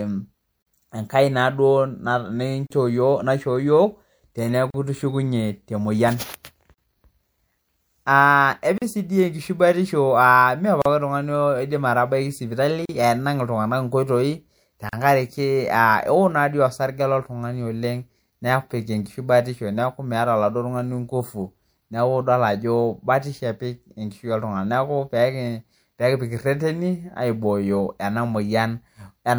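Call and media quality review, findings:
Gap at a join of encoded pieces in the speech, repeating every 2.0 s: 0.62, 2.67, 4.70, 6.74 (right after "itishukunye te mpyian"), 8.78, 10.82, 12.85, 14.89 s. First gap 43 ms, rest 38 ms; abrupt, smeared edges, speech resumes where it stopped. Probable component: segmenting encoder/concatenation step. Mechanism: separately encoded 2 s chunks joined untrimmed, so start delay and end-frame padding remain as silence.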